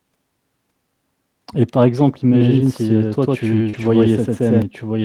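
From 2.32 s to 4.62 s the speech has a doubled audio track: a second copy at about the same level trails the original by roughly a tenth of a second. It is most likely a second capture path running late or an edit that left two copies out of step. It sounds like a hard, dry slapback with no room tail, and it starts and stops abruptly. A spectrogram shows every syllable repeated as an identical, equally bright full-band shadow about 100 ms later. The waveform shows paired envelopes with a sudden onset and cutoff.

At 3.69 to 3.75 s there is a short concealed packet loss. About 40 ms of audio never arrived in time, and the receiver filled 38 ms of it by extending the preceding sound before blending back into the real signal. It is heard as a brief smear or wobble. On a spectrogram the harmonics or noise at that point flatten into a steady, slightly blurred stretch instead of moving naturally. 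The waveform there looks repetitive and smoothed.

From 3.73 s to 3.87 s, 80 ms of audio is a lost packet rebuilt from error correction. The pattern points to four separate losses that the decoder covered with low-bitrate copies carried in the following packets, so there is no gap. Those frames sound rougher and grainier. On a spectrogram the harmonic detail is coarser and more noise-filled than in the frames on either side.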